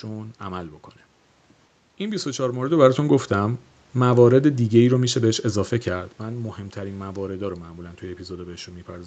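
No technical faults are audible anywhere in this recording.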